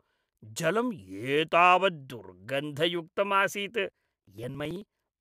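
Periodic USB or driver dropouts run from 3.90 s to 5.14 s of the speech. Every 54 ms, something stalls the USB bus or the audio driver, and around 10 ms of audio is skipped outright rather than replaced with silence. That happens about twenty times, so the sound jumps forward in small, evenly spaced gaps. The result is a rapid, regular ticking, roughly eighteen clicks per second, heard only where speech is present.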